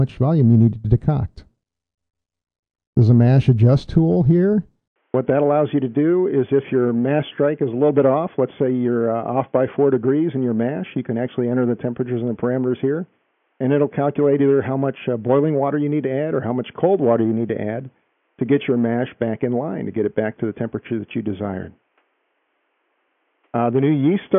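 At 4.88 s there's an 80 ms gap, then the sound goes boxy, cut off above 3.4 kHz and a bit quieter to the end, likely an input switched to a poorer device.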